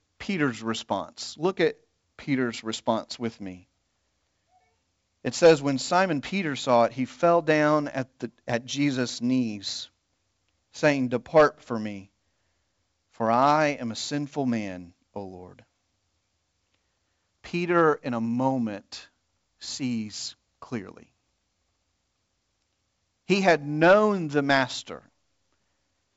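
The speech comes through G.722 wideband telephone coding at 64 kbit/s, which keeps it clear up to about 7 kHz with at most a faint hiss in the upper band, and nothing in the signal stands out as a technical problem.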